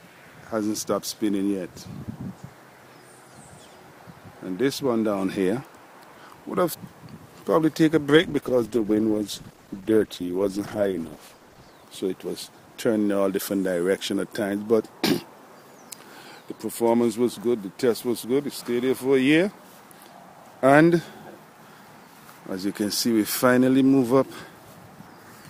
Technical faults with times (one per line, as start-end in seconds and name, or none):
8.15-11.79 call bitrate drop